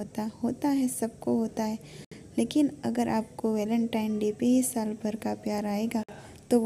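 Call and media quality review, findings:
Gap at a join of encoded pieces: 2.05–2.12 s (69 ms) and 6.03–6.09 s (51 ms). Untrimmed encoder delay and last-frame padding from separately encoded segments. Smeared edges, then sound resumes.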